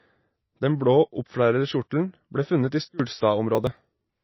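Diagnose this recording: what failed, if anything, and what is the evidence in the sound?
Codec stage: the speech sounds watery throughout, with nothing above 5.8 kHz. This is likely MP3 compression at a low bitrate, near 24 kbps. Unlike a simple low-pass filter, it also smears consonants.

Processing stage: from 2.84 to 3.00 s, speech and background noise drop together by about 24 dB at a single sample, likely a sudden gain jump. A fade would ramp instead.

Driver or buffer stage: from 3.55 to 4.10 s, gritty tearing rides on the speech. This is processor overload crackle, with around twenty buffers of roughly 10 ms skipped. Unlike a single dropout, it is a rapid run of tiny gaps.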